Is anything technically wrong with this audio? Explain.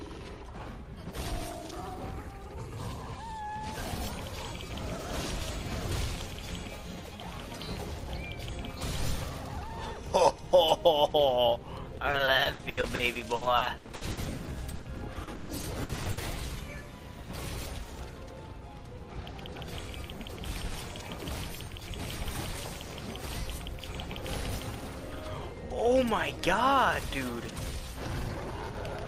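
Yes. From 11.97 to 16.19 s the audio turns choppy, with pieces missing. This is repeated packet loss: dozens of short holes, the longest 140 ms, are each filled by stretching the preceding sound. About 1.26 s, roughly 30% of that span, is patched in.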